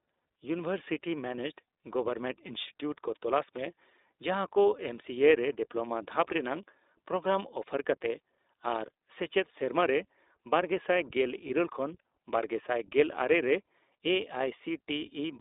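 iLBC codec, throughout the speech: the whole clip has passed through this narrowband VoIP codec, which codes each short frame's excitation independently of the frame before. The band is confined to roughly 300 Hz to 3.7 kHz, so the speech sounds thin and telephone-like. The coding damage is plainly audible as a slightly rough, synthetic grain. The character fits the 15.2 kbps mode with 20 ms frames.

Lost iLBC frames, from 11.48 to 11.52 s: a packet goes missing, and the decoder fills the hole by repeating the last pitch cycle blended with noise. The result is a brief held, faintly buzzy vowel in place of the real sound. This fits a single lost 20 ms frame. Because each iLBC frame decodes on its own, the speech returns to normal immediately after the gap.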